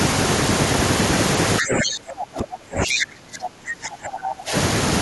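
From 1.6 to 4.53 s the speech sinks in and out in what sounds like speech suppressed in double talk, dipping by around 25 dB at its deepest. The likely cause is an echo canceller turning down its own talker while the far side spoke. Unlike a dropout, the level ducks and recovers rather than vanishing cleanly.

Inside that stretch, from 2.91 to 3.02 s, a brief scrap of the other side's voice leaks through, only a few dB below the talker. It is likely loudspeaker echo the canceller failed to remove. It is a separate second voice, not a delayed repeat of the talker's own speech.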